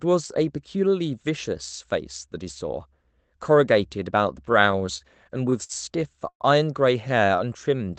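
From 4.45 to 5.72 s the speech shows repeated stalls (stutter). The jitter buffer kept running dry as packets arrived late or too slowly, and the receiver bridged each gap by extending the last sound. Nine such breaks, the longest 54 ms, add up to 156 ms, about 12% of that stretch. Nothing is lost, but delivery lurches and catches. A single freeze would be one longer hold; these are many short ones.

At 6.29 s the sound hangs and fades, with about 80 ms of near-silence within a 112 ms pause, before it resumes at 6.43 s. This call audio freeze likely came from packets held up in transit, emptying the buffer while the last sound was stretched and faded, and then added the same 112 ms of delay. Because it is one continuous gap rather than a string of catches, it stands apart from the earlier stutter, and nothing is missing when playback continues.

From 7.26 to 7.96 s a jitter buffer slow-down drags the speech to about 91% speed, adding 74 ms as the receiver rebuilt its reserve by repeating single pitch periods and bits of pauses. 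The pitch stays put while sounds draw out. There are no stops or fades here, which separates it from both the stutter and the freeze. Throughout, the call path's codec bandwidth tops out at 8 kHz, which fits Opus at roughly 24 kbps.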